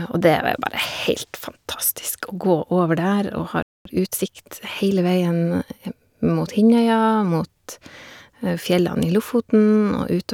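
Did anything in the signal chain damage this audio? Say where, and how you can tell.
Yes, at the playback stage. The speech stops dead in mid-flow from 3.63 s to 3.85 s, about 230 ms of silence, then resumes. That points to a playback stall, most likely the player's buffer running dry or its output thread being blocked. A network dropout or concealed packet loss would tend to skip or smear content rather than simply pause and pick up.

Immediately afterwards, from 3.85 s to 4.29 s, the speech runs at roughly 1.5 times normal speed with its pitch unchanged. This is time-compressed catch-up: the player trims its accumulated backlog by cutting out short pieces and cross-fading the joins. A sample-rate mismatch or speed error would raise the pitch along with the tempo and would not be confined to the moment right after the gap.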